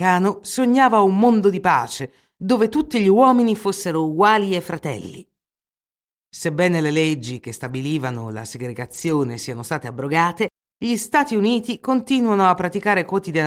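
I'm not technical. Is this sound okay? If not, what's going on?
No. Two kinds of fault are audible in this speech.

Lost packet rebuilt from error correction, at 3.01 to 3.03 s just after "dove tutti", at 7.63 to 7.77 s after "le leggi che", and at 8.93 to 9.11 s just before "siano state". Small pieces of the audio went missing in transit. The piece that followed each one carried a rough backup copy, and that copy was played instead. There are no silent gaps, but for brief moments of 20, 80 and 100 ms the sound turns grainy and noisy.

Drift correction step, from 3.81 to 4.94 s and again from 9.91 to 10.50 s. The audio suddenly plays about 6% off speed, and the pitch moves with it by roughly a semitone before snapping back. The likely cause is software that keeps two devices' clocks in step and briefly changed the playback rate to correct the audio it had stored up.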